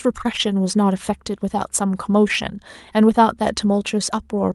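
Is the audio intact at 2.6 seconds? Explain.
Yes, the speech at 2.6 s is intact, with no dropout, glitch or other fault at that moment beyond the ordinary coding of the call path it passed through.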